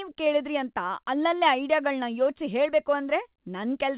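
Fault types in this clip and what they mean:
No faults detected in this clip.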